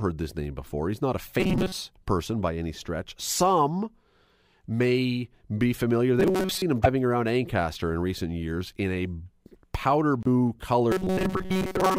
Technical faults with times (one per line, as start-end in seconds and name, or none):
1.40-1.81 robotic sound from repeated short buffers
6.20-6.62 robotic sound from repeated short buffers
6.83-6.86 broken MP3 bit reservoir
10.23-10.27 broken MP3 bit reservoir
10.92-11.98 robotic sound from repeated short buffers